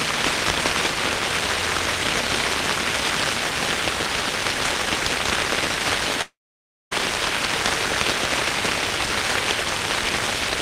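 From 6.21 s to 6.93 s, a likely long network dropout: the last sound smears into a fading buzz or hiss, then about 0.58 s of silence, a blank spectrogram band and flat waveform, before sound resumes with roughly 0.7 s missing.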